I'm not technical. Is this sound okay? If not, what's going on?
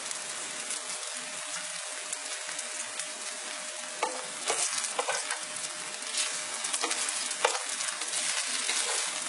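No. The whole clip has a gritty, metallic top end, and nothing comes through above about 11.1 kHz. That points to heavy HE-AAC compression as the likely cause: the treble is rebuilt from copied lower bands rather than kept, so it sounds artificial.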